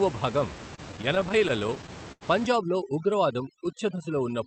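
From 0.75 to 2.23 s, repeated stalls (stutter) hit the speech: sixteen brief holds, the longest 88 ms, where late packets let the buffer run dry and the last sound was stretched, showing as smeared, repeated waveform segments. From 2.46 s to the end, overdone noise removal takes hold. Bands near the background level are switched off, leaving near-silent gaps with twinkling specks on the spectrogram, and quiet parts of the voice go with them.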